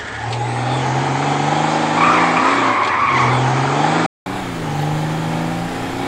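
From the start to 4.26 s, the sound is dull and boxy, with nothing above 8.6 kHz. A faint background noise sits well under the signal. At 4.26 s there is a gap of about 200 ms. Then the sound opens up, brighter and fuller, with a level change of about 5 dB. This points to an input switched to a poorer device. The system likely recorded through a narrower-band microphone or headset profile, then changed back to the better input.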